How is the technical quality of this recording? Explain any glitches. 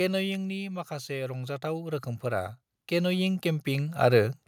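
The level is unstable, with two automatic gain faults in this speech recording.

Automatic gain falling runs from 0.05 to 0.92 s. The control judged the input too loud and eased gain down about 4 dB. Speech and background sink together.

Automatic gain rising runs from 1.06 to 4.43 s. The control judged the input too quiet and lifted gain about 13 dB. Speech and background swell steadily together.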